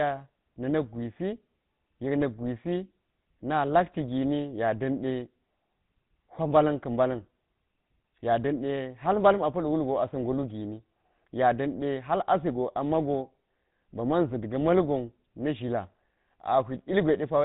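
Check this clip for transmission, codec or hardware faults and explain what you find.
There is one codec fault. Throughout, the speech carries GSM full-rate codec damage: vocal-tract modelling driven by regular pulse excitation leaves a buzzy, gravelly roughness and nothing above 3.8 kHz, consistent with 13 kbps.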